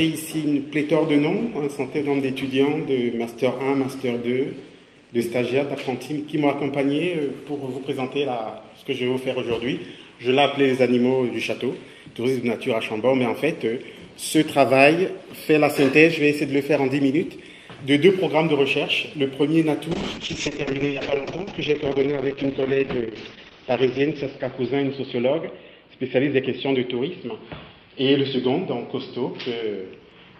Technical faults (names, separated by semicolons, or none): call bitrate drop